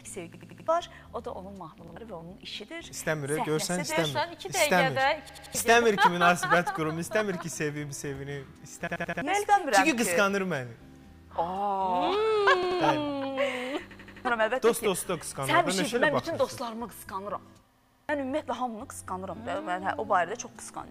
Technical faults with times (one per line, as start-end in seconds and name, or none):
0.34-0.68 repeated buffer
1.88-1.96 repeated buffer
5.29-5.55 repeated buffer
8.87-9.22 repeated buffer
12.63-12.80 repeated buffer
13.91-14.25 repeated buffer
17.75-18.09 repeated buffer